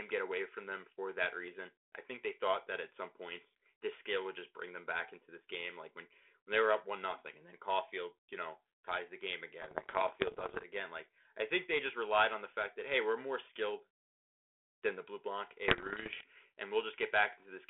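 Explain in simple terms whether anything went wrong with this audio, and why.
Two stretches of bit errors on an ADPCM link, from 9.62 to 10.66 s and from 15.68 to 16.24 s: flipped bits upset the decoder, so the speech pops and goes briefly rough.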